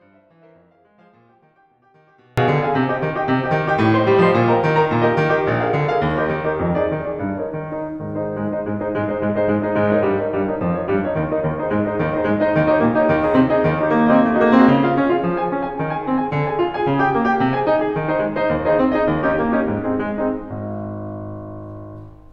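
The music signal was likely lost upstream while the path after the break stayed live, an audio dropout to a faint residue already under way as the clip opens. Until 2.38 s only a faint leak of the music remains, about 35 dB down, before full level returns abruptly.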